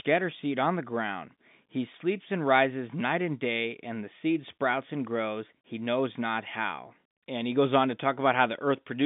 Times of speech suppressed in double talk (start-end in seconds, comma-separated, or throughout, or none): none